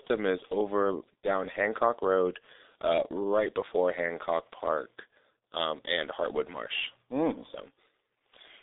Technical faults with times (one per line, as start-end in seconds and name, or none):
0.00-8.62 G.723.1 codec